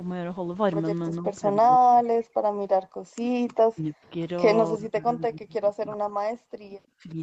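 Speech that dips and breaks up repeatedly: from 1.16 to 1.49 s the level sags by about 10 dB, then from 1.69 to 2.22, 3.02 to 3.21, 3.45 to 4.11, 4.73 to 6.29, 6.47 to 6.76 and 6.96 to 7.18 s it drops by roughly 30 to 40 dB and cuts out in pieces. This is likely speech suppressed in double talk, where the echo canceller, confronted with both ends speaking at once, attenuated the near talker along with the echo. Separately, from 2.5 to 2.6 s the room background falls away by about 27 dB and then returns. That is background gated by the echo canceller, which clamped the microphone while the loudspeaker played.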